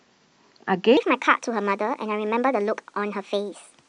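From 0.97 s to the end, a section at the wrong speed: speech runs 1.33 times fast, about five semitones higher. Likely a clock mismatch.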